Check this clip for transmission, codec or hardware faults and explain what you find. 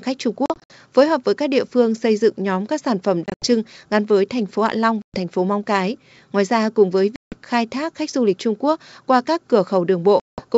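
Yes, there is one fault: packet loss on an ADPCM call, recurring five times over clean wideband G.722 audio that sounds consistent with 64 kbit/s.

Gaps fall at 0.46–0.74 s (before "phối hợp với các"), 3.26–3.47 s (after "nhóm các sản phẩm"), 5.02–5.17 s, 7.16–7.36 s (after "ra cùng với") and 10.20–10.44 s. Each drops roughly 120–180 ms as hard-edged silent holes. The decoder's predictor and step size then mismatch the sender's, so speech resumes slightly distorted before settling.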